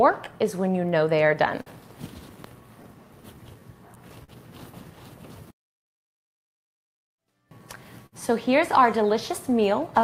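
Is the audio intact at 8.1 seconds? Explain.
No. From 8.06 to 8.15 s a sound is held too long, with a slight buzz or dip. This is a short stall from a late packet: the jitter buffer ran empty, so the receiver stretched the last sound by 60 ms until the packet arrived, then carried on from the same place with nothing lost.

The moment also sits inside repeated timing corrections running from 0.05 to 9.99 s. Playback runs at 99% speed, with roughly a tenth of a second added overall. The receiver keeps repeating small pieces to stay in step.

Behind both is clock drift between sender and receiver. The sender's clock runs slow by roughly 4 percent, so the buffer keeps draining. That causes the repeated stretches throughout.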